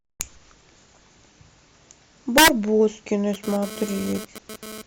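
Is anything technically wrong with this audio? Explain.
Yes, the speech has two faults. Integer overflow occurs at 0.21 s and from 2.38 to 2.48 s. The peaks exceed the integer limit by about 2 dB and about 5 dB and wrap to the opposite sign instead of being held there. The result is violent cracks, far harsher than clipping.

GSM phone buzz runs from 3.34 to 4.82 s. A nearby 2G phone's 217 Hz transmit bursts are rectified in the audio circuitry, producing a raspy, harmonic-rich buzz about 16 dB below the speech that comes and goes, consistent with a data transfer.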